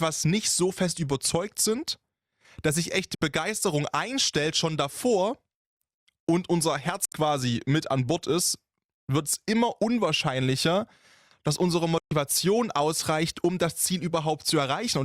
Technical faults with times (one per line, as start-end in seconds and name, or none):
3.15-3.22 digital broadcast dropout
7.05-7.12 digital broadcast dropout
11.98-12.11 digital broadcast dropout